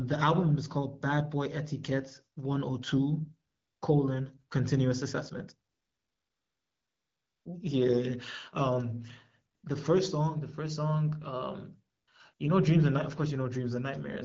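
AMR comfort noise replaces the real background at 3.49–3.81 s, 5.69–7.45 s, 9.55–9.63 s, 11.95–12.07 s and 12.33–12.39 s. The phone stopped sending speech frames, so a steady, smooth synthetic hiss switches in rather than the silence of a dropout.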